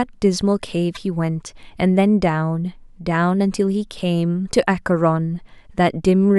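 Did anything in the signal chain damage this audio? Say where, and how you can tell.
Yes. At 0.95 to 0.97 s there is a short glitch from damaged data in a compressed stream, at the codec or storage stage. Corrupted bytes made the decoder misread frames and resynchronise. On a spectrogram it shows as a brief broadband smear; on the waveform, a 26 ms discontinuity.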